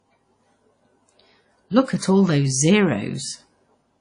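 Speech, and the damage runs through the whole clip: a ringing, washy quality with a hiss that swells and fades along with the signal, and nothing at all above about 10.1 kHz. That adds up to likely WMA compression at a low bitrate, something in the region of 32 kbps. The transform coder smears its quantisation noise over long blocks and throws away the weak upper detail, so the codec damage is plainly audible.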